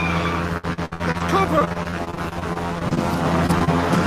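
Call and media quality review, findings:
Repeated packet loss (robotic sound), 0.57–2.99 s: choppy texture with pieces missing. Network path and jitter buffer; concealment repeatedly extends prior sound, roughly a quarter of the span synthesized, gaps up to 61 ms. Spectrogram: stretched, repeated harmonic bands with vertical seams.

Short concealed packet loss at 3.47–3.50, 3.58–3.62 and 3.64–3.69 s: brief smears or wobbles. The decoder's concealment fills each 20 ms hole from preceding sound, then blends back. Waveform: continued prior sound with small discontinuities at edges; spectrogram: short flattened patches.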